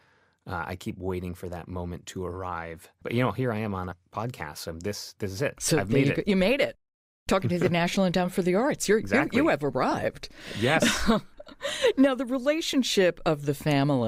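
A skip breaks the speech at 3.91 s, just after "here I am on", and again at 8.25 s, just before "for the", each time jumping ahead by about 70 ms. A shorter skip of about 20 ms follows at 9.91 s after "exactly you you have". These are compressed frames skipped: whole blocks of coded audio were lost or rejected as damaged. The jump sizes fit roughly seven and two 10 ms frames.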